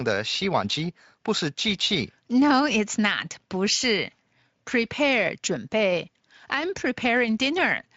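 No technical faults are audible in this speech.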